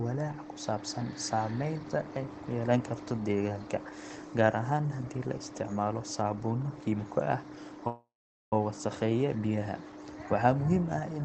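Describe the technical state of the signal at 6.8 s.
At 6.8 s the speech signal is intact, with no dropout, click, distortion or other fault, only the ordinary coding character of the call path it travelled through.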